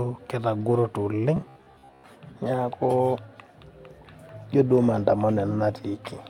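From 1.37 to 2.04 s the speech turns into a robotic sound from repeated short buffers: a rigid, metallic buzz locked at 66.8 Hz. That pitch likely comes from replaying roughly 15 ms chunks for most of the stretch. Unlike mains hum, it still roughly follows the words.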